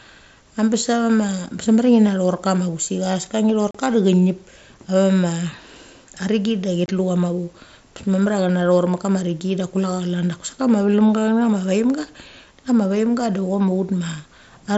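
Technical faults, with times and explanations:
3.71 s and 6.86 s, unconcealed Bluetooth headset packet loss: voice packets between headset and phone went missing, leaving gaps of about 38 ms and 23 ms that are filled with silence or an idle pattern rather than smoothed over. The abrupt dropouts with hard edges set this apart from concealed loss, which smears the gap, and from codec grit, which never fully silences the audio. The gap lengths fit runs of 7.5 ms mSBC frames, with the wideband mSBC link itself carrying the speech up to 8 kHz.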